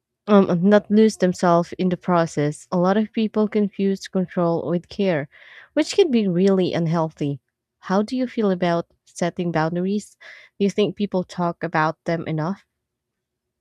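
No dropouts, clipping, glitches or other faults can be heard anywhere in the recording.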